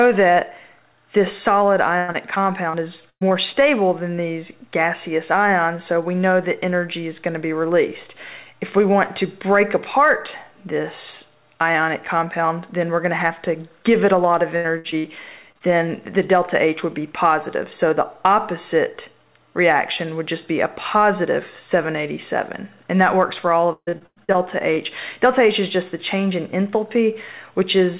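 Repeated packet loss (robotic sound) runs from 1.98 to 3.32 s. Six gaps, the longest about 115 ms, are each patched by stretching the preceding sound, so the stretch turns choppy, with pieces missing, with about a quarter of it synthetic fill. The same fault returns from 14.56 to 15.06 s with four gaps, the longest 77 ms, and concealment fills nearly half that span.

Short concealed packet loss follows at 15.52 to 15.57 s and again at 15.59 to 15.62 s. Each time about 20 ms never arrived in time, and the decoder bridged the hole by extending the last sound before blending back, leaving a brief smear or wobble.

Repeated packet loss (robotic sound) hits hardest from 23.73 to 24.39 s. Seven gaps, the longest 142 ms, mean over half the span is concealment, and the sound turns choppy, with pieces missing. A final short concealed packet loss at 24.75 to 24.78 s adds one more small smear. Throughout, nothing is heard above 4 kHz, which fits a 64 kbps G.711 A-law call path.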